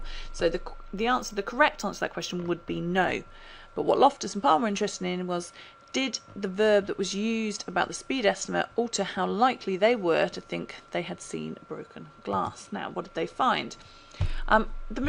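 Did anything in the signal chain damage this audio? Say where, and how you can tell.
Yes. From 0.79 to 3.09 s the top end turns dull while a faint metallic shimmer rides on the brightest sounds. That is imaging from linear upsampling at the sample-rate conversion stage. Straight-line interpolation, consistent with a 22 kHz source raised to 48 kHz, leaves mirror copies of the spectrum between 11 kHz and 22 kHz, roughly 35 dB below the signal.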